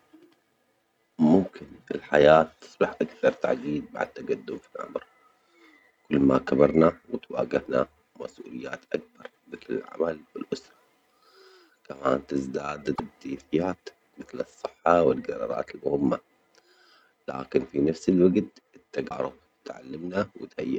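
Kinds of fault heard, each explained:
Damaged data in a compressed stream: a few stretches of the encoded speech got corrupted, so the decoder misreads the frames there, loses its place and has to hunt for the next clean frame header before it can carry on. You hear each one as a quick glitch breaking into the speech, at 4.05 s, from 6.91 to 6.94 s, from 12.92 to 13.00 s, and from 19.06 to 19.11 s. None of them lasts longer than a tenth of a second.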